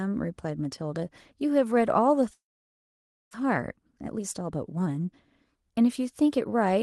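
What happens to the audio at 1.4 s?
Nothing goes wrong at 1.4 s: the speech carries straight through that moment intact, with only the ordinary character of the Opus call path, whose audible bandwidth fits a limit of about 12 kHz.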